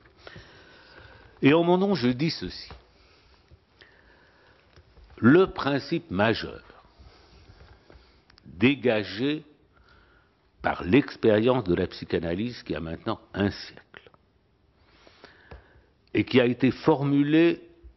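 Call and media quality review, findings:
Nothing stood out on listening, so there are no findings to log for this recording.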